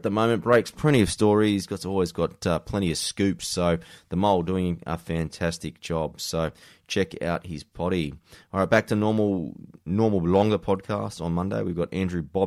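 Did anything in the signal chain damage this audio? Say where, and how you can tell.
No, nothing in the signal chain damaged this speech recording. There is no audible event anywhere in the clip that points to trouble at any stage between capture and playback.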